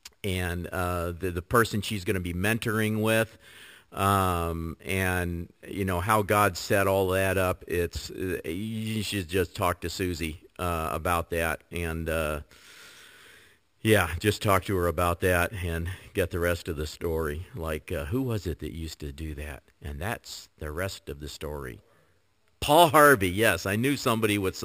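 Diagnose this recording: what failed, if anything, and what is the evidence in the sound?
Sample-rate conversion failed, giving imaging from sample-and-hold upsampling throughout. Fizz fills 6 to 12 kHz, about 17 dB down, which fits 12 kHz audio held without smoothing.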